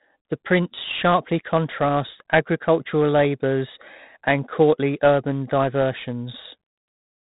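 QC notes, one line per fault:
Throughout, 4-bit ADPCM compression: heavy gritty hiss rides on every loud syllable and drops away in pauses, unlike steady background hiss, while sharp onsets crackle where the adaptive step lags. Nothing sounds above 3.8 kHz, which fits 32 kbps at an 8 kHz rate.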